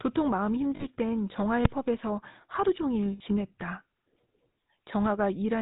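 Throughout, the speech carries the buzzy, gravelly roughness of the GSM full-rate codec, which points to the 13 kbps mode. The codec rebuilds the voice from a vocal-tract model driven by a coarse, regularly spaced pulse excitation that keeps only one sample in three, and nothing above 4 kHz survives. The damage is plainly audible as a constant grainy buzz and dull top end. Unlike a generic low-pass or MP3 smearing, it rasps on voiced sounds.

From 0.76 to 0.86 s come lost GSM frames. The decoder has no valid data, so it repeats the last good frame's settings at falling level, and the voice freezes into a short metallic ring. A gap of this size fits about two frames. Unlike a dropout, there is no silence, and unlike a click, the held tone lasts tens of milliseconds. The same thing recurs, longer, from 3.12 to 3.21 s, which fits about four frames. Here the ring is more drawn out but still stops well short of fading to silence.

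At 1.65 s, invalid numbers at full scale produce a single sharp bang. A calculation yielded infinite or invalid values that were forced to the largest sample value. The block is only about 2.7 ms long, which fits a 128-sample block, so its start and end pops merge into one. It is far louder and shorter than the frame-loss rings, and it has no tonal content.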